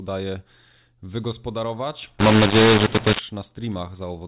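Telephone-band speech, band-limited below 4 kHz by its G.711 coding, turns harsh and gritty from 2.19 to 3.19 s. That second shows mu-law and A-law mixed up: samples encoded as mu-law are decoded as A-law, which scrambles levels, distorting peaks and lifting quiet passages into noise.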